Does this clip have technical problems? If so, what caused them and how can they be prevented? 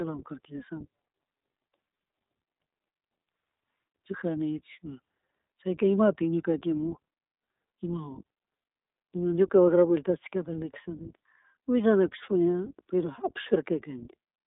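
Yes. The speech runs through the iLBC codec for the whole clip. Nothing above 3.8 kHz survives, and the band sits near 250 Hz to 3.7 kHz. Each 20 ms frame is coded on its own, leaving a plainly audible rough, synthetic edge. That fits a rate near 15.2 kbps. To prevent it, use a wideband codec such as Opus at a higher bitrate.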